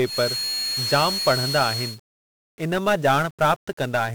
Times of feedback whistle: 0.00-2.00

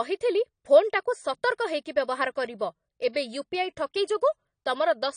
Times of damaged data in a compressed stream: none

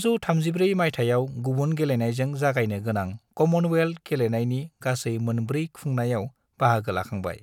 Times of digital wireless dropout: none

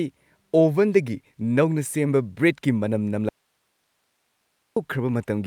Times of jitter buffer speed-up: none

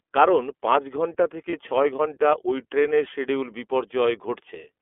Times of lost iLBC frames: 1.50-1.54

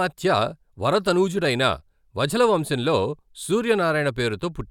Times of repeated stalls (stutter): none

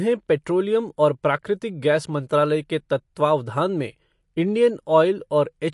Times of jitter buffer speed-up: none

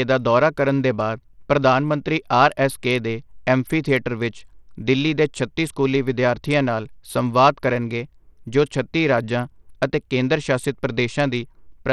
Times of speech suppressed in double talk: none

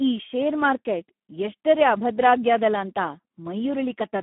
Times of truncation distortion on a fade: none

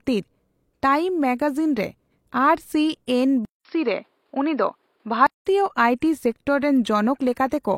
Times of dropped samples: none

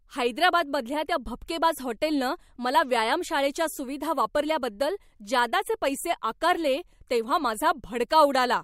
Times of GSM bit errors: none

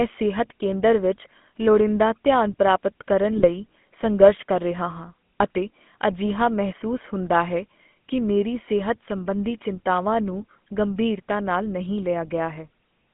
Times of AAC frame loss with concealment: none

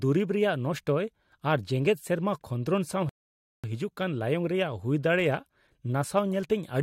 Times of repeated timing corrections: none

